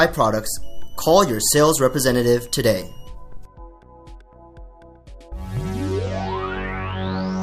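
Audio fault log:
0.63–3.09 s, switching supply whistle: a faint whine drifting around 2.8–3.0 kHz, well below the signal, from a power supply's switching leaking into the audio.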